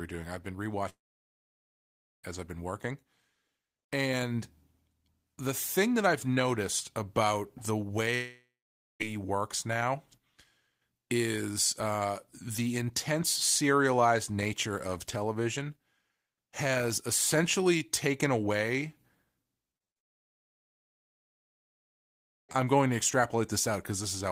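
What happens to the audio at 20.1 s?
At 20.1 s the audio is inside a long network dropout, running from 19.98 to 22.57 s. The stream likely stopped arriving, so the last sound is briefly stretched into a fading buzz, then about 2.5 s of silence follows before the audio resumes with that portion missing.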